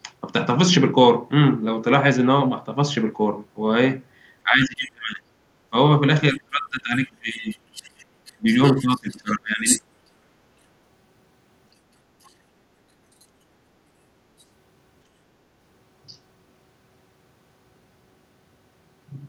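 From 4.43 to 9.91 s the talker's speech is suppressed in double talk. The level sags by up to roughly 25 dB, over about four seconds in total. Both sides were likely talking at once, and the echo canceller turned everything down.

Inside that stretch, from 6.33 to 9.82 s, the other side's voice leaks through, about 15 dB below the talker. Brief scraps return at 12.24 to 12.3, 13.21 to 13.25, 14.39 to 14.44 and 16.08 to 16.17 s. Each is far quieter, about 30 to 40 dB down. Likely the echo canceller missed part of the loudspeaker signal.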